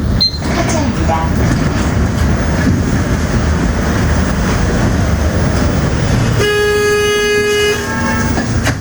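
These sounds show gain pumping throughout: the gain swings by roughly 10 dB, squashing the dynamics. Unlike a noise gate, the floor never drops to silence. The likely cause is excessive input gain driving a fast limiter.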